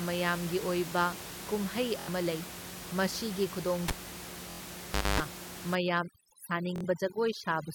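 At 2.00 s, just after "ꯃꯌꯥꯝꯒꯤ ꯑꯣꯏꯕ ꯀꯨꯝꯍꯩ", a Bluetooth stutter runs until 2.09 s, ending before "ꯂꯩ ꯃꯁꯤꯒꯤ". About 70 ms of audio failed to arrive in time, and the receiver filled the gap by replaying its last short buffer several times over. That produces a brief mechanical buzz, which points to roughly three lost packets. Speech then picks up further along, as though it had kept running underneath. The same fault returns at 4.51 to 4.61 s, with a gap of about 93 ms, consistent with four packets, and again at 6.76 to 6.85 s, another gap of about 70 ms.

From 3.88 to 5.20 s, right after "ꯂꯩ ꯃꯁꯤꯒꯤ", there is a cable pulled and plugged in. A pop marks the disconnection, followed by about 1.27 s of near silence. A 50 Hz mains buzz lasting about 240 ms is heard while only the plug tip makes contact. A second pop follows as the full connection is restored. The 4.51 s stutter falls inside this dropout.

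From 5.75 s to the end at 7.74 s, overdone noise removal is applied. The room noise, sitting about 11 dB below the speech, is attacked by a gate that shuts down individual frequency bands whenever they come close to its noise estimate. This leaves the background nearly silent apart from scattered twinkling artefacts, and the quieter parts of the voice are stripped away with it.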